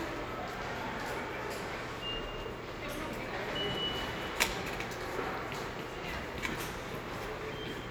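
No technical faults can be heard anywhere in the recording; the signal stays intact throughout.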